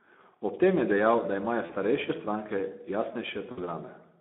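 The speech sounds thin, hoarse and grainy all the way through, limited to roughly 200 Hz to 3.6 kHz. This is plainly audible Speex codec damage: the CELP coder has too few bits to model the excitation, which fits a setting around 11 kbps. At 1.65 to 1.75 s and again at 3.51 to 3.71 s, the sound smears into a fading buzz or coloured noise and stays weak briefly afterward. This is VoIP packet loss concealed by the speech codec. About 40 ms and then 60 ms went missing, pointing to two and then three lost frames, and the decoder extrapolated the last pitch and filter at falling gain.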